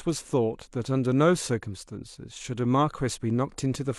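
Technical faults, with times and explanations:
No technical faults can be heard in this clip.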